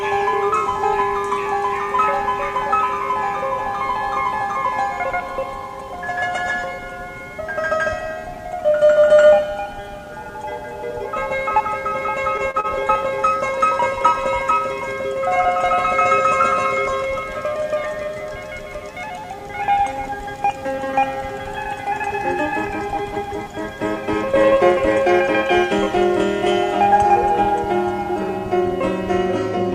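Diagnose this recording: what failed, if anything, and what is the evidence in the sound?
Network stage: short stalls from a late packet at 12.51–12.57 s and 12.60–12.67 s. The empty jitter buffer held the last sound 34 and 35 ms, losing nothing.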